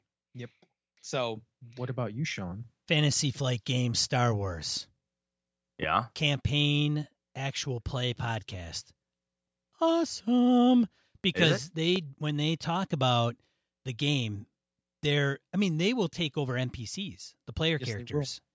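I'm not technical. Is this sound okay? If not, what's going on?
No, not entirely. Two kinds of problem can be heard.

The first is automatic gain rising. From about 0.33 to 3.69 seconds, the level slowly climbs. The recording device decided the input was too quiet and turned itself up bit by bit. The speech and the background noise get louder together over those few seconds. By the end it is noticeably louder than at the start. Nothing is lost, but the opening sounds uneven.

The second is a loud pop, heard twice: from 5.83 to 5.85 seconds, and again from 11.96 to 11.98 seconds. Each is one short, sharp click or thump, clearly louder than the speech around it. The speech carries on underneath without a break. A sudden jolt of electricity got into the signal, likely from a loose plug, a switch, static or a hiccup in the sound hardware.

The audio also went through a call's usual microphone processing, which trims the deepest bass and the very highest treble. 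That part is normal and not a fault.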